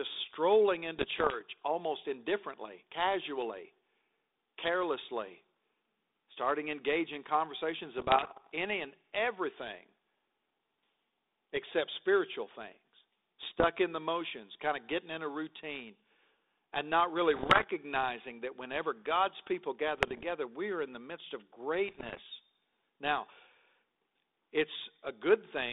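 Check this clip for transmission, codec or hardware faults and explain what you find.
The clip has repeated bit errors on its ADPCM link, carried over a narrow telephone band that fits 32 kbit/s G.726.

Bit errors on an ADPCM link occur at 0.98–1.42 s (just before "almost indifferently casually"), 7.98–8.52 s (after "starting engaging conversations"), 13.43–13.67 s (after "except spiritual things"), 17.34–17.64 s, 19.96–20.26 s and 21.88–22.21 s. Flipped bits corrupt the decoder's step size and prediction, so each error lingers, producing pops, rough bursts and brief level jumps.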